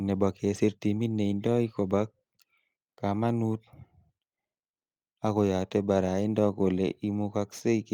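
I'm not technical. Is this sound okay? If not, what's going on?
Yes, nothing here sounds wrong with this recording.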